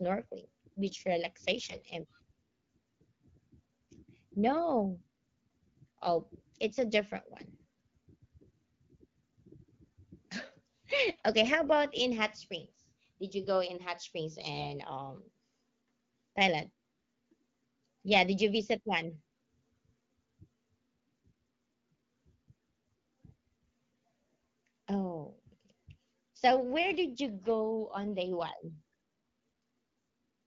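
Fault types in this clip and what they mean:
AMR bit errors: Weakly protected bits in the speech frames arrive corrupted while the frames are still accepted as valid. The excitation pulses land in wrong places, and fine pitch, gain and spectral values drift. Pitch and level hold roughly steady, but the speech turns hoarse, scratchy and gargly. This happens in three short bursts: 1.59 to 1.86 s, 19.33 to 19.43 s just after "did you visit one", and 22.51 to 22.63 s. The error rate fits roughly 5 to 7 percent.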